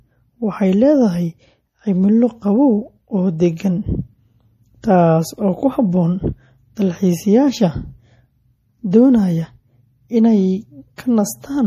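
A watery, swirling quality runs through the whole of this speech recording. Sibilants carry a metallic, chirpy edge, and nothing is present above about 15.2 kHz, where the treble is cut off cleanly. The damage is plainly audible and points to MP3 compression as the likely cause, at a low bitrate of around 40 kbps. Short of bits, the encoder drops everything above a fixed frequency and zeroes quieter frequency lines, which flicker in and out from frame to frame and produce the swirl. At 10.96 s a sharp onset is preceded by a brief hiss spread over about 19 ms, and the attack itself sounds softened. That is pre-echo. The codec distributes its quantisation noise across the whole transform block, so noise sized for the loud onset also fills the quiet instant just before it.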